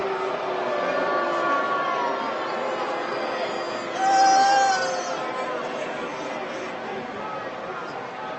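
Nothing in this audio points to a technical fault; the band-limiting near 8 kHz from the call path is consistent with a 24 kbps Opus link.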